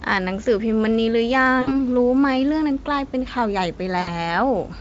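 VoIP packet loss concealed by the speech codec in this speech clip, at 1.61 to 1.81 s and 4.01 to 4.15 s: the Speex decoder's extrapolation smears each gap, which fits about 60 ms lost, into a fading buzzy tone or coloured noise.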